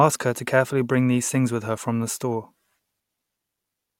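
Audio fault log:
throughout, resampler restarted on every block: the speech carries a regular tick every 40 ms, a 25 Hz pattern that sits under the voice and drops away in pauses. The rate change from 44.1 kHz to 48 kHz was done on each block separately, so at every block edge the converter's filter lacked the true neighbouring samples and filled in silence or wrapped-around data. The small error left at each seam is the tick.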